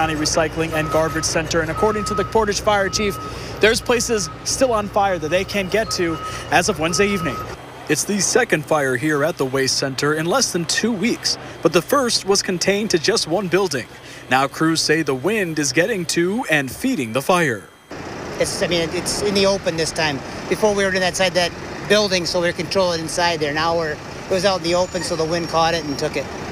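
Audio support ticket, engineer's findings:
No audible faults found on review; nothing to escalate.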